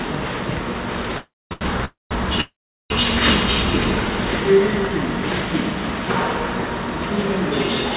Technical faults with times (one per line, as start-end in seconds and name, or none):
1.18-1.53 call audio freeze
1.53-1.63 short stall from a late packet
1.85-2.13 call audio freeze
2.41-2.92 call audio freeze